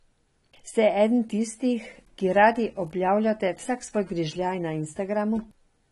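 Throughout the speech, nothing is present above 11.8 kHz, and codec damage is plainly audible from start to finish. The likely cause is AAC compression: AAC-LC quantising its frequency lines against a tight bit budget, which fits roughly 32 kbps, pulling the band limit down.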